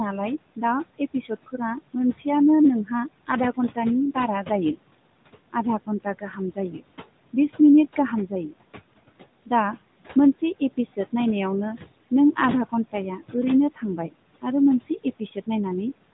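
Right from the start there are noise suppressor artifacts running through the whole thing. The suppressor pulls the steady room noise down by about 21 dB, working band by band on each short frame, so the background drops away in the gaps and comes back up under the talking.

The same processing also causes speech cut by the noise suppressor, in four stretches: 0.56 to 2.26 s, 2.85 to 4.79 s, 5.53 to 8.57 s and 12.11 to 15.48 s. In each one the suppressor mistook bits of speech for noise and turned them down with the background, by about 17 to 22 dB at worst. The deepest cut comes in the third stretch. Only fragments are hit, adding up to a few hundred milliseconds per stretch and closer to most of a second in the third. Soft consonants and word tails sound swallowed or go faint. All of this sits inside a narrowband phone signal with nothing above 3.8 kHz.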